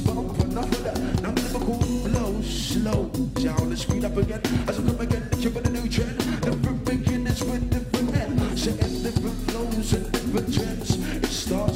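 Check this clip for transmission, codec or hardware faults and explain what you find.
There's one fault here, crude rate conversion, and it runs through the whole clip. The audio was resampled by a small ratio, and the pattern points to a 44.1 kHz to 48 kHz step, done by simply repeating the nearest sample with no filtering. That leaves an error that cycles with the ratio between the two rates, sitting roughly 25 dB under the signal, and it adds shifted, inharmonic copies of the sound. You hear it as a gritty, inharmonic fizz riding on louder and brighter passages.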